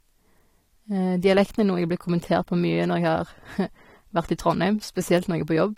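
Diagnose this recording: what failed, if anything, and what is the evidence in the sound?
The codec stage failed: the speech was likely encoded at a low bitrate and then saved again at a high one, making it low-bitrate audio saved at a high bitrate. Throughout, nothing sounds above 16.6 kHz, a limit the larger second encoding cannot restore.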